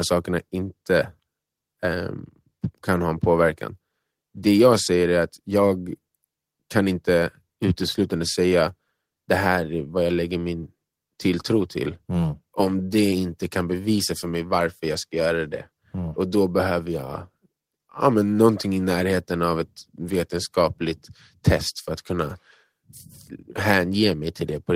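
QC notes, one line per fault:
Nothing to flag here; I listened to all of this speech and there's nothing that needs a note.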